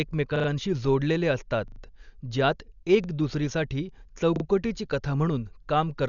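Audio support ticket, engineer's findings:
Dull, band-limited speech for the whole clip, nothing above 6.9 kHz, with rough fluttering noise around voiced tones. Sound points to Dolby Digital compression at a low bitrate, likely AC-3/E-AC-3 near 48 kbps. Mechanism: encoder narrows the band and starves many frequency lines of mantissa bits. The decoder fills those lines with dither noise, which gives the roughness.

Repeated buffer, short hard-edged stutters at 0.36–0.48 s, 1.68–1.80 s after "जोडलेले असतात", 3.04–3.08 s after "जोडलेले असतात ज्यात", and 4.36–4.44 s before "कथा म्हणून". Each stutter is one short slice replayed two to four times with a hard join at each repeat. Repeat spacing fits a 40 ms buffer. Playback device re-sent its last buffer when new data arrived late. No program audio appears to be skipped.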